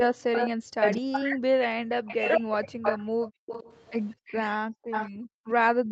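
From 0.0 to 1.21 s an echo leak is audible: a delayed copy of the speech about 5 dB below it, trailing by 213 ms, likely from a loudspeaker echo the far-end canceller missed. Over 0.12 to 2.73 s, speech is suppressed in double talk, dipping by up to roughly 40 dB across about two seconds as the canceller likely ducks both its own talker and the echo. Further echo leaks follow at 2.07 to 2.29 s (217 ms, about 15 dB down) and 2.82 to 3.92 s (220 ms, about 10 dB down). Background gated by the echo canceller drops the room sound by about 40 dB from 3.08 to 3.46 s and again from 4.15 s to the end. From 4.91 s to the end, echo at 226 ms returns about 5 dB below the speech.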